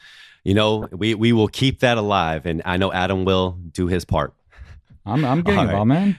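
Speech, with a brief patch of noise blips from 0.82 to 0.86 s. This is DAB burbling: weak reception lets bit errors slip past error correction, briefly putting short noise blips into individual sub-bands.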